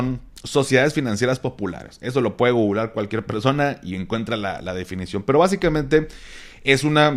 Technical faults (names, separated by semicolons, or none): none